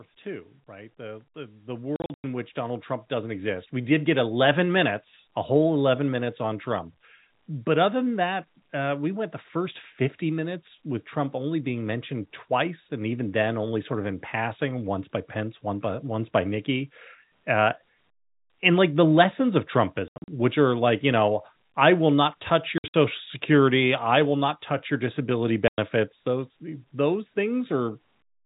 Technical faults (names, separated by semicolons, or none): automatic gain rising; packet loss filled with silence